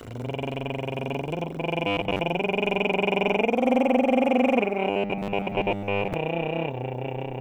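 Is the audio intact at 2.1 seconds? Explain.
No. From 1.87 to 2.19 s the music turns into robotic sound from repeated short buffers, likely from late-arriving audio being patched by looping a 10 ms chunk. Most of the material is replaced by a rigid 100 Hz metallic buzz. A spectrogram shows evenly spaced harmonics every 100 Hz, and the waveform repeats identical short cycles.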